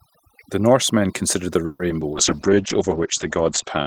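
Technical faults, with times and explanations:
Throughout: overdone noise removal. Over-aggressive suppression zeroes bands near the noise floor; the spectrogram shows a blank background speckled with isolated musical-noise dots.
1.65–1.81 s: call audio freeze. The sound stretches into a fading buzz or hiss for about 140 ms, then resumes where it stopped, likely a drained jitter buffer; the waveform shows a smooth decaying tail.
1.89–1.92 s and 2.00–2.03 s: short concealed packet loss. Each is a brief smear where lost audio was patched by extrapolation, with a bit skipped; the spectrogram shows blurred, smoothed harmonics.
2.13 s to the end: call bitrate drop. The encoder falls from 32 to 10 kbps and the audio turns rough and muffled; the spectrogram shows energy above 8 kHz abruptly cut off.
2.36–2.62 s: jitter buffer slow-down. Repeated pitch periods add about 44 ms, so the audio plays at 87% speed at unchanged pitch; the waveform shows near-identical cycles repeating.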